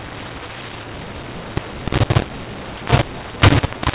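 Throughout the speech, mu-law and A-law are mixed up. The audio was coded as mu-law but decoded as A-law, so sample levels come out scrambled. The voice sounds harsh and distorted, and pauses fill with noise. The telephone band itself stops near 4 kHz, as G.711 should.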